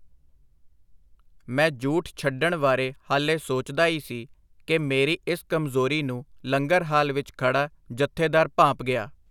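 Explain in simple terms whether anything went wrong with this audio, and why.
Nothing went wrong with this speech recording: no dropouts, clicks, distortion or other faults can be heard at any point.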